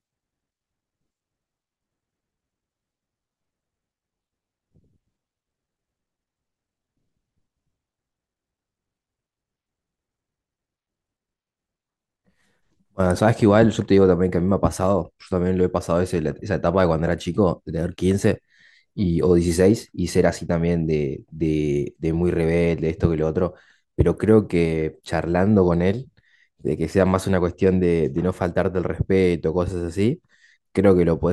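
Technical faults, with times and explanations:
No technical faults are audible.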